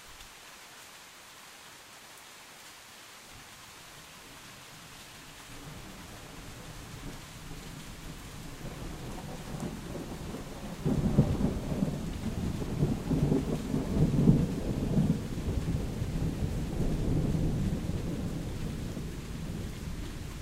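No faults are audible anywhere in the recording; the sound holds steady with nothing to flag.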